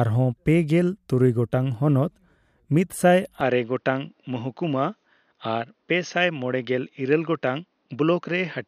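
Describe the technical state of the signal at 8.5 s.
At 8.5 s the speech sounds duller and boxy, a little quieter, with a faint new background noise sitting far below it. Nothing above about 6.5 kHz comes through. The change began abruptly at 3.41 s, with no gap, and lasts to the end of the clip. The likely cause is an input switched to a poorer device: a narrower-band microphone path with its own tone, lower level and its own noise floor.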